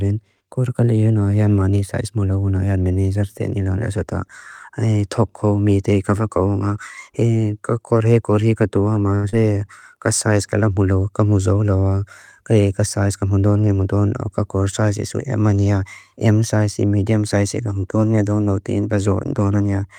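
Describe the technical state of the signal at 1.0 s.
At 1.0 s the speech signal is intact, with no audible fault at that moment.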